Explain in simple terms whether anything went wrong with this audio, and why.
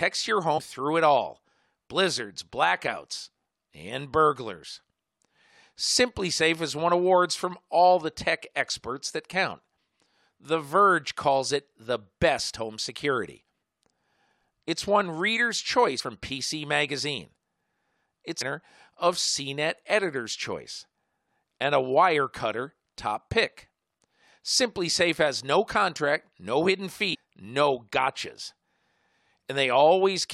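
Short blips of damaged data in a compressed stream show up in this speech at 0.57–0.59, 15.99–16.01, 18.40–18.42 and 27.13–27.16 s. Bad bytes in the file trip up the decoder, which loses its place and briefly glitches.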